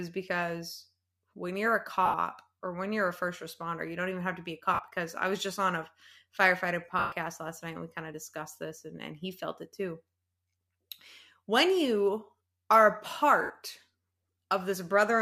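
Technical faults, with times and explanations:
2.06–2.14 s, 4.74–4.79 s, 6.99–7.12 s and 13.42–13.50 s, lost LE Audio frames: gaps of 80, 50, 130 and 80 ms in the speech, the first after "because when you're a", the second after "have to be a", and the third after "just on a firefighter". The LC3 decoder concealed each loss by replaying the last good spectrum with randomised signs, turning the sound into a brief noisy smear. The concealment fades after the first few frames, so the 130 ms gap sinks furthest towards silence. The lengths fit runs of 10 ms frames.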